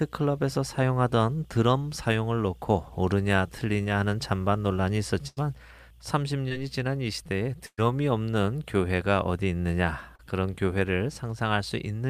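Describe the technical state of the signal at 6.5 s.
Short concealed packet loss at 6.49–6.52 s: 20 ms never reached the decoder in time, so it extended the preceding sound and blended back, leaving a brief smear.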